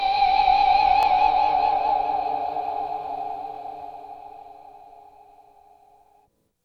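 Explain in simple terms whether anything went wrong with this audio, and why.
Something did go wrong. There's a brief stutter or click three times, evenly spaced about 2.5 seconds apart: at 1.03–1.05 s, 3.55–3.58 s and 6.08–6.10 s. Each time, a tiny slice of sound, about 23 milliseconds long, plays twice. This is called overlapping chunks: the audio was handled in 2.5-second pieces, and each new piece started slightly before the previous one had finished, so the overlap was heard twice at every join.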